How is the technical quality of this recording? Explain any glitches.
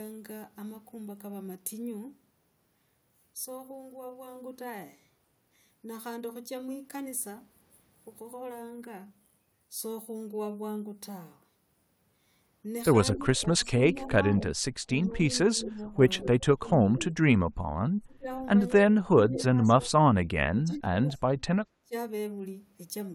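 The second half of the recording has clear echo-control problems from one side of the call.

Echo leak appears at 13.13–13.17, 15.62–16.28, 19.33–19.43 and 21.11–21.16 s. A faint copy of the speech returns about 220 ms late. It is about 15 dB down, and the last one about 30 dB down. The likely cause is a loudspeaker echo the canceller didn't fully remove.

Speech suppressed in double talk runs from 13.14 to 17.23 s and from 18.0 to 21.93 s. The talker's level dips about 15 dB in the first stretch and up to roughly 30 dB in the second. This likely happened because the canceller mistook overlapping talk for echo.

Background gated by the echo canceller occurs at 17.60–17.72 s. The room sound drops about 9 dB for roughly a tenth of a second, as the canceller clamped the microphone while the loudspeaker played.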